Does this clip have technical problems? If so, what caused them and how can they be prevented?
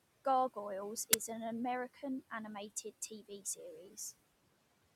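Yes. The noise suppressor is lowering the room noise, which sits about 18 dB below the speech, by about 18 dB throughout. Its noise suppressor artifacts are a background that sinks between words and rises under them. On a spectrogram, the noise floor shows blotchy, flickering patches. A gentler suppression depth would prevent this.

At 1.13 s, a 10 ms burst of harsh digital noise comes from an uninitialised buffer: a block was played out before any audio was written to it, so leftover memory became samples. The waveform shows a sudden spike, and the spectrogram a bright vertical stripe. Zero-filling buffers before playback prevents it.

The speech cut by the noise suppressor falls at 1.94–2.03 s (drops of about 13 dB), 3.09–3.58 s and 3.88–3.97 s (about 9 dB each). The suppressor took quiet speech for noise, so parts sound swallowed, roughly a tenth of a second each time. The spectrogram shows speech energy abruptly thinned. 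Better voice-activity detection would prevent this.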